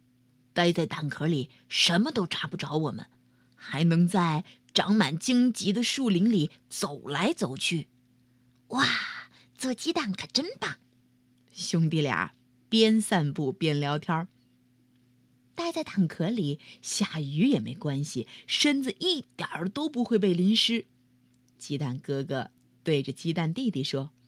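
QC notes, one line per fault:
No faults found in this speech recording.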